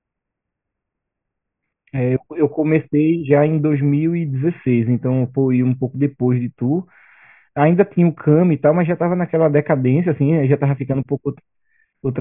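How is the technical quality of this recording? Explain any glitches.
No glitches or technical faults can be heard anywhere in this speech recording.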